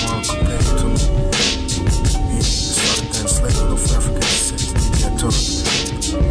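Nothing stood out as a problem when listening to this recording.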